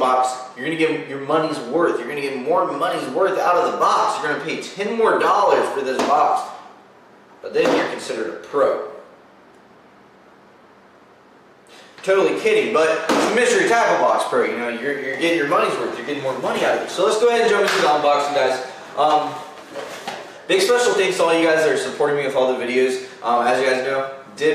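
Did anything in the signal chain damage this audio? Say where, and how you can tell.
No, nothing damaged this audio.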